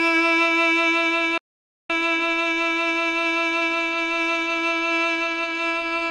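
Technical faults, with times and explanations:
1.38 to 1.90 s, playback stall: the sound cuts out for about half a second, then carries on, likely because the player ran short of data or got blocked.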